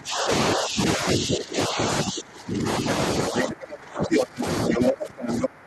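A speech recording with speech suppressed in double talk from 0 to 2.87 s and again from 3.29 to 5.66 s. The talker's level sinks by around 20 dB in the first stretch, over roughly two seconds in total, and by around 25 dB in the second. The likely cause is an echo canceller clamping down while both sides talk at once. It differs from ordinary gain riding because the dips follow the other party's activity rather than the talker's own loudness. The other side's voice leaking through appears as brief scraps at 3.37–3.44 s, 4.12–4.23 s, 4.73–4.90 s and 5.30–5.47 s, a little below to about as loud as the talker. It is likely loudspeaker echo the canceller failed to remove. Unlike room reverberation, it is a separate second voice, not a smeared tail of the talker's own sound.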